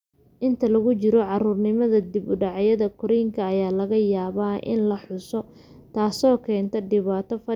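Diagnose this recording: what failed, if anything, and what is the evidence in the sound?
Nothing in this speech recording points to a failure at any stage of the chain, so there's really nothing to diagnose here.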